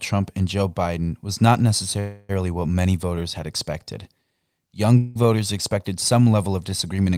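At 1.99 s the sound stops moving forward. Its last moment is drawn out as a buzz or hiss that fades, until 2.31 s. This is a call audio freeze. Packets were likely held up in transit, so the jitter buffer ran dry and the receiver filled about 296 ms. Nothing is lost. The audio then picks up where it stopped, about 296 ms late. The same happens from 4.97 to 5.17 s, filling 180 ms and adding that much delay.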